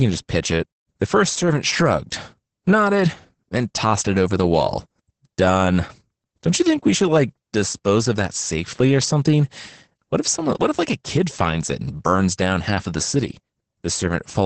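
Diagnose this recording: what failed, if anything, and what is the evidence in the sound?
The damage is at the codec stage: it's Opus voice compression, and it's heavy for the whole clip. Nothing survives above about 8.5 kHz, so the speech sounds muffled, and under that cap it's hoarse and a bit robotic. That's SILK running in wideband mode: the band is capped at 8 kHz and the excitation is coded very coarsely. The overall roughness fits a starved bitrate of around 10 kbps.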